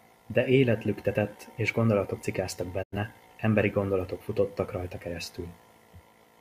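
At 2.82 s, right after "lüktetett és gondolatok cikáztak", the speech fades to silence over about 20 ms and stays muted until 2.96 s, resuming mid-flow at "emberi gondolatok futottak rajta". This is a digital broadcast dropout: the receiver lost good frames and muted rather than play corrupted data. The hole, roughly 85 ms of missing programme, fits about two lost frames, and whatever was spoken in that gap is gone.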